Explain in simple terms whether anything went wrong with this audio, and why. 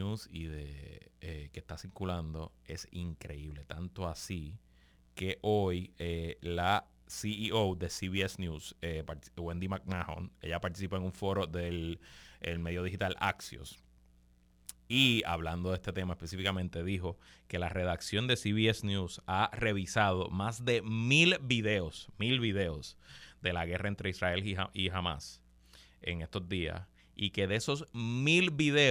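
From 0 to 16.6 s there's crude rate conversion: samples were simply repeated without filtering, which fits a 44.1 to 48 kHz change, leaving a gritty fizz on the speech.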